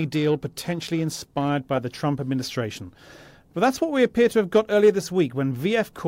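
Periodic clock jitter runs from 0.0 to 1.5 s, ending just before "by the". An interfering signal at around 1 kHz wobbles the converter's sampling clock, so each frequency component in the speech picks up sidebands spaced about 1 kHz above and below it, stronger for higher components. The result is a rough, metallic edge riding on the speech that vanishes in the pauses, since silence has nothing for the sidebands to form around.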